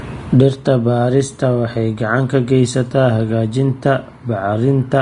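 Throughout the speech, the treble is hissy and grainy, consonants sound smeared, and voiced sounds take on a rough edge. The likely cause is heavy Vorbis compression at a low bitrate: fine high-frequency detail is coarsely quantised into noise-like grain of similar energy. On a spectrogram, energy stops at a flat ceiling near 10.6 kHz, with speckled, blotchy texture below it instead of clean harmonic lines. The waveform shows softened attacks.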